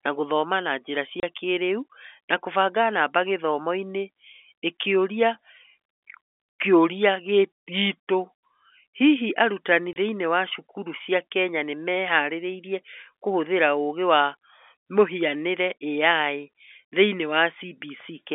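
At 1.2 s and 9.93 s, packet loss filled with silence punches 30 ms holes with hard edges, which fits one lost packet each, not concealed or smoothed over.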